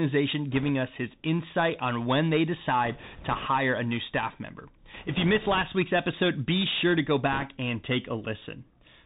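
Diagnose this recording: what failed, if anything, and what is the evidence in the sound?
The codec stage failed throughout: the speech has been squeezed through the Bluetooth CVSD headset codec, and the damage is plainly audible. Nothing passes above 4 kHz, so a spectrogram shows a hard ceiling there. Sibilants turn scratchy, and a granular hiss sits under the voice, appearing as a speckled noise floor between harmonics. The one-bit delta modulator's step size lags behind loud high-frequency energy, so the output cannot keep up and those peaks distort. All of this fits a 64 kbps CVSD stream.

The wireless link also took bit errors on a Bluetooth voice link in four bursts: 0.51–0.70 s, 2.85–3.48 s, 4.94–5.63 s and 7.32–7.46 s. Each burst adds a rushing, crackly noise, roughest in the last one, with error rates on the order of a few percent. There are no loud clicks, because each flipped CVSD bit only nudges the output one small step and the error decays away. 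A spectrogram shows broadband haze smeared across those spans, and the waveform shows fuzz rather than spikes.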